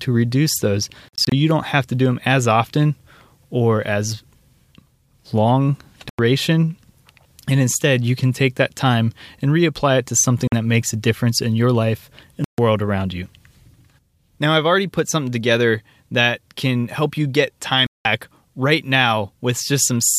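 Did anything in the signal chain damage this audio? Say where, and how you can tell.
Yes. In wireless playback, a likely Bluetooth dropout lost packets, cutting the speech to abrupt silences before it resumed as if it had played on. This happened at 1.09–1.32 s after "reduce those" (broken gaps), 6.09, 10.48, 12.44 after "difference in your life", and 17.87 s after "can help you get".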